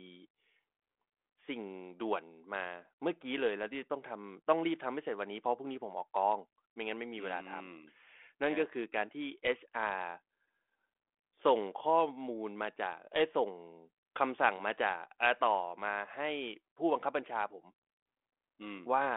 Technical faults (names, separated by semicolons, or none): none